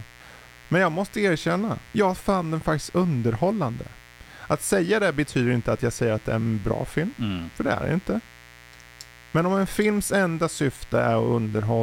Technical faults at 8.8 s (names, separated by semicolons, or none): mains buzz